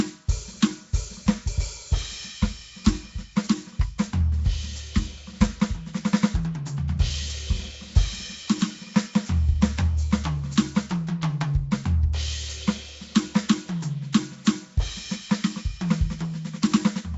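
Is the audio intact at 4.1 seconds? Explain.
No. Nellymoser compression covers the whole clip, including 4.1 s. The music likely went through Flash's Nellymoser Asao codec, which codes coarse fixed-size blocks and fills weak bands with noise. The result is a rough, hissy, smeared sound with nothing above 7.7 kHz, consistent with a rate of about 32 kbps.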